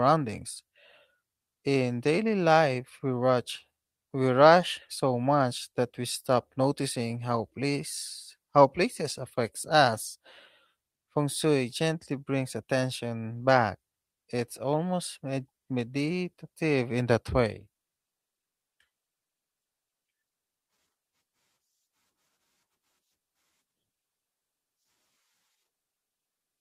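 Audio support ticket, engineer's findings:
Speech signal checked with no audible technical faults found; level, continuity and playback timing hold steady throughout, and no component needs action.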